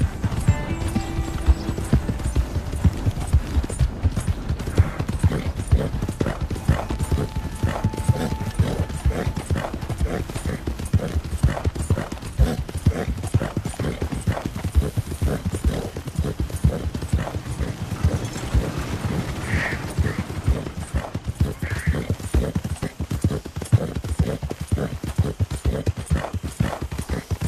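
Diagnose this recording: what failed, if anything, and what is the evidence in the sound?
Damaged data in a compressed stream shows up as brief glitches at 2.03 s and 14.31 s and over 22.83 to 22.85 s, each a short chirp or blip lasting 10 to 20 ms. The failure is at the codec stage. Corrupted bytes in the encoded file or stream made the decoder misread or discard the affected frames and lose frame sync. It produced a garbled burst until it found the next valid frame header and resumed clean decoding.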